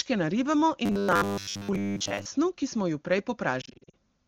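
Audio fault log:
0.86–2.26 s: robotic sound from repeated short buffers. A rigid, metallic buzz at 100 Hz, which fits a 10 ms stretch being replayed for most of this span, roughly seven parts in ten, while fresh audio is skipped. The sound is likely starved of new buffers. Clear speech resumes at "ki smo ju prej".
3.61–3.95 s: lost AMR speech frames. Just after "ki smo ju prej", brief dips and warbles are scattered over about a third of a second. Damaged frames are bridged by reusing the last good pitch and vocal tract settings at falling gain. About 200 ms is lost in total, in short gaps no longer than 40 ms.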